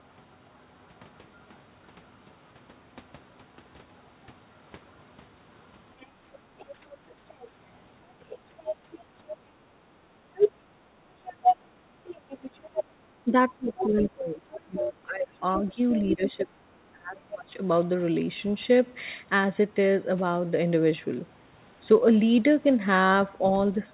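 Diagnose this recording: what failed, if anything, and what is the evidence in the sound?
A faint second voice sits under the talker at 0.0–1.56 s and 3.98–4.02 s. It grows louder at 5.63–9.36 s, reaches full level at 10.35–12.84 s, and returns at 13.77–16.31 s. This is likely the other side's voice leaking through, loudspeaker echo the call-processing canceller failed to remove.

The room background dips by about 9 dB between 9.91 and 10.92 s, for only a brief total moment. The background is gated by the echo canceller, which clamps the microphone while the loudspeaker plays.

Between 13.24 and 17.55 s the talker's voice drops by roughly 25 dB in pieces, for about three seconds in total. This is likely speech suppressed in double talk, with the canceller unable to separate the talker from the loudspeaker echo and turning the talker down.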